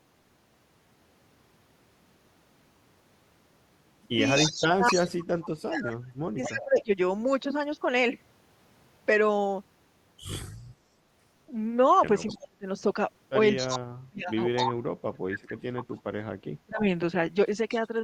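A speech recording in which a delayed second copy of the voice trails the talker by about 253 ms at 4.36–5.25 s, 6.43–6.81 s, 12.27–12.37 s, 13.56–15.55 s and 17.71–17.76 s. It is loudest, only about 5 dB under the speech, in the first and fourth stretches, and fades to about 30 dB down by the last. This is an echo leak, likely from a loudspeaker-side echo canceller passing part of its microphone pickup back into the call. Overlapping those echoes, the talker's own voice sinks by up to about 35 dB at 4.39–6.93 s and 12.3–12.66 s, and by up to about 40 dB at 13.58–16.86 s. That is roughly two seconds of lost level in the first and last spans and a fraction of a second in the middle one. This is speech suppressed in double talk, likely because the canceller could not tell the talker from the returning echo and turned both down together.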